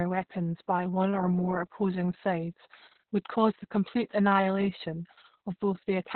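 Throughout, Opus voice compression in narrowband SILK mode cuts everything above 4.3 kHz and coarsens the excitation, which fits a very low bitrate near 6 kbps. The speech sounds muffled, hoarse and robotic, which sets it apart from a plain low-pass filter.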